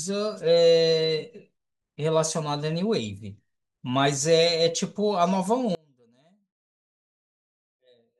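At 5.75 s the speech cuts out abruptly and never returns, an audio dropout to a faint residue lasting to the end. The likely cause is a lost feed into a path that stayed live, leaving a faint leak roughly 35 dB down, unlike a fade or natural pause.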